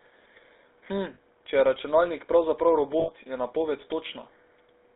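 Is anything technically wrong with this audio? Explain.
Yes, two things. The whole clip has gone through the GSM full-rate codec: the speech is squeezed into roughly 300 Hz to 3.7 kHz and has that buzzy, gravelly texture, plainly audible, which fits the old 13 kbps full-rate codec rebuilding the voice from pulses.

There are also lost GSM frames, at 1.14 to 1.19 s and again at 3.00 to 3.11 s. The decoder covers each gap by reusing the last good frame, so you hear a brief metallic ring holding the sound, about 40 ms and then 80 ms long.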